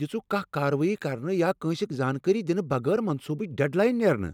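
No dropouts, distortion, noise bursts or timing errors can be heard anywhere in the recording, so there is nothing to report.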